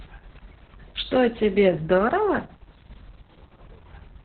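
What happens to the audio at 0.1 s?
At 0.1 s you're already hearing Opus voice compression, and it runs through the whole clip. The sound is squeezed into a narrowband SILK mode with nothing above 4.4 kHz, and the coarse excitation coding makes the speech muffled, hoarse and a bit robotic, which fits a very low bitrate around 6 kbps.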